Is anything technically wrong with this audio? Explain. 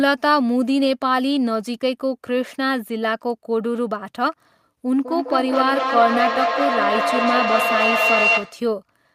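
Yes. From 4.86 to 8.74 s there is feedback howl: a microphone-to-loudspeaker loop gains level each pass, so repeats grow rather than decay and narrow to a tone around 3 kHz, repeating roughly every fifth of a second and climbing to about the level of the speech.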